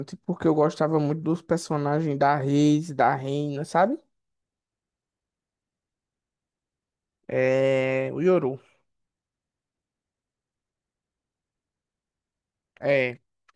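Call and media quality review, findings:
No faults found in recording.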